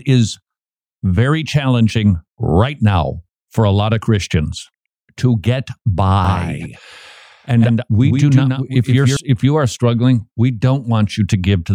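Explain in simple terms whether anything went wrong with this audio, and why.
A doubled audio track runs from 6.25 to 9.17 s, likely because the speech was picked up a second time through a slower path. A somewhat quieter copy trails the original by roughly 150 ms, giving a clean, slapback-like echo that starts and stops abruptly.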